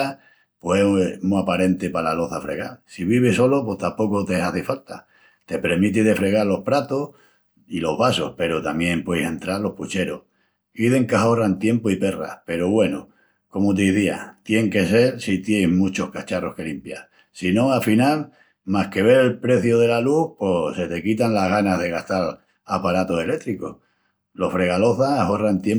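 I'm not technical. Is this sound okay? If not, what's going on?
Yes, this sound is okay; there's nothing wrong going on in it.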